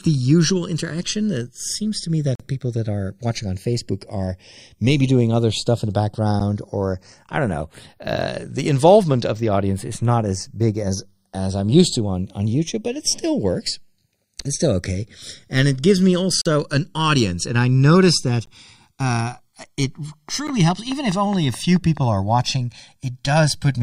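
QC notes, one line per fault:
Throughout, channels drifting apart: a clock mismatch of roughly 100 ppm slowly widens the inter-channel delay to about 1.5 ms, so mono sums sweep comb notches, heard as slow flanging.
2.35–2.40 s, 6.40 s, 14.41 s, 16.41–16.46 s, 18.46 s, 20.47 s, gap between stream segments: hard-edged silences of 9 to 42 ms fall at 2 s segment boundaries, for example between "seems to me" and "people that are watching". Timestamps leave holes that the player fills with silence, and no sound is lost.
20.29–21.98 s, train of clicks: about ten regular pulses at roughly 4.8 per second tick over the speech, peaking around 10 dB above it, likely from interference or a faulty connection or power supply.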